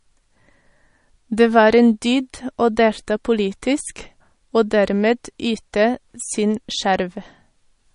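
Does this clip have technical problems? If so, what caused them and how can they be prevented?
Yes. Throughout the speech there is a watery, swirling quality, with metallic chirps on s sounds and consonant attacks that smear. Nothing is present above 10.6 kHz. This is most likely MP3 compression at a bitrate low enough to leave plainly audible damage, which fits roughly 40 kbps: short of bits, the encoder cuts the treble at a fixed point and drops weak frequency lines that flicker on and off between frames. To prevent it, keep a lossless master and encode at a higher bitrate or with a more efficient codec.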